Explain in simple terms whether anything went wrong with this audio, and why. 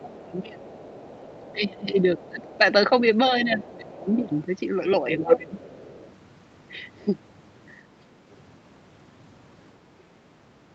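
Two things went wrong. There's speech suppressed in double talk at 0 to 0.66, 1.38 to 2.91, 3.44 to 4.32 and 5.19 to 5.64 s, where the talker dips or chops out, likely because the echo canceller ducked everything while both sides spoke. There's also the other side's voice leaking through, a faint second voice at 0.23 to 2.57, 3.96 to 4.42 and 5.31 to 6.16 s, likely loudspeaker sound the canceller didn't fully remove.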